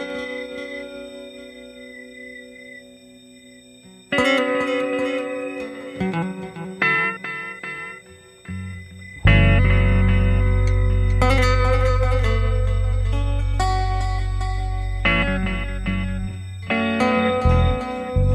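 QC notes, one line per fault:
Throughout, USB whine: current drawn by the USB bus in 125-microsecond microframes is leaking into the audio path through the power or ground, putting a steady tone at 8 kHz, about 40 dB below the signal, under everything in the clip. Because the bus keeps that fixed rhythm, the pitch never drifts. It sits as a thin, high, constant whine.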